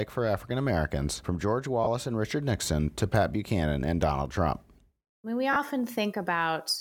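At 1.84 to 1.87 s and again at 5.53 to 5.56 s, just after "I mean we", lost LE Audio frames leave 30 ms gaps, which fits three 10 ms frames. The decoder fills each one by reusing the last spectrum with random signs, producing a brief noisy smear. On a spectrogram the harmonics blur into formless energy, and the waveform shows a short, irregular patch.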